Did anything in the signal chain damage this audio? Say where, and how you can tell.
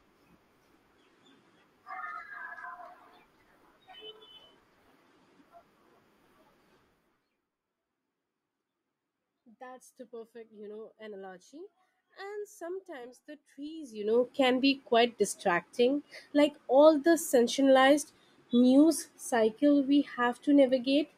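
Yes. At the gain stage, around the buffer level, zipper noise runs from 13.75 to 14.25 s, between "sometimes the" and "can be quite distracting". A level move of roughly 20 dB was applied in unsmoothed steps, around a hundred a second, so a fast ticking buzz rides on the sound. The waveform envelope shows a staircase, and the spectrogram shows evenly spaced faint vertical lines.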